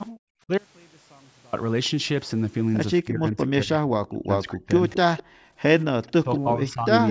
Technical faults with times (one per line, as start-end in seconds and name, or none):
0.11-0.19 background gated by the echo canceller
3.03-4.75 speech suppressed in double talk
4.90-5.23 echo leak
5.23-5.57 background gated by the echo canceller
5.80-5.84 echo leak
5.85-6.89 speech suppressed in double talk
7.07-7.11 echo leak